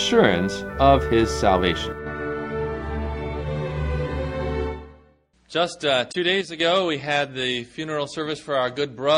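At 1.92 s the level falls abruptly by about 6 dB. It recovers at 2.06 s. The same drop returns from 6.41 to 6.60 s. Each dip is brief, with hard edges on both sides. The likely cause is one channel dropping out. With one stereo side gone, the mono sum loses half of what both sides share. Anything carried only on the missing side vanishes for the duration.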